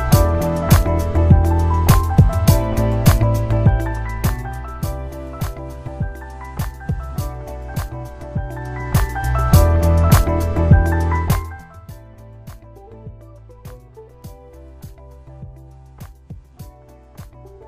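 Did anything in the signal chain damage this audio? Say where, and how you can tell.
Yes. Zipper noise from a gain stage in the driver or buffer path, where level changes are applied in unsmoothed 1 dB steps. From 3.39 to 4.88 s the level drops by about 10 dB with a slow ticking, around seven steps a second. From 11.15 to 11.89 s it falls by about 25 dB, and the steps come at roughly 30 a second, so the clicks merge into a zip. Each step is an abrupt jump in the waveform, heard as a click.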